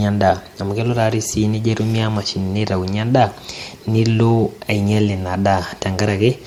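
Transcoding between lossy codecs runs throughout the speech, from start to finish. The mixed artefacts sound like an earlier coding layer whose artefacts were then re-encoded, which fits MP3 at around 64 kbit/s followed by Opus at around 48 kbit/s. That chain is the likely cause. The second codec spends bits reproducing the first one's damage and adds its own, so both kinds of artefact sit together. Nothing remains above about 20.1 kHz.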